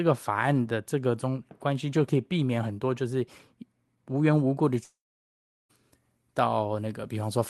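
From 4.63 s to the end, the treble boost applied before recording or transmission was never undone, so pre-emphasis is left on. High frequencies sit about 8 dB too strong at 10 kHz relative to 1 kHz, making the speech thin, bright and hissy on sibilants.

From 4.83 s to 5.71 s, a long network dropout is the likely cause of the gap. The last sound smears briefly into a fading buzz, then about 0.73 s of near-silence follows, and the speech resumes with roughly 0.86 s of material simply gone.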